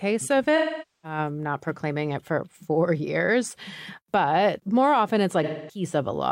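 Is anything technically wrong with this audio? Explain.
Yes. Two dropouts break up the speech. From 0.56 to 1.18 s, just before "not proclaiming it for", and from 5.43 to 5.84 s, right after "years but more often", the sound turns smeared, noisy and phasey. This is AAC frame loss with concealment. Coded frames went missing, roughly 0.47 s and 0.26 s of them, and the decoder patched each gap by reusing the last good spectrum with scrambled phase or interpolated energy. That stand-in material produces the blurred texture.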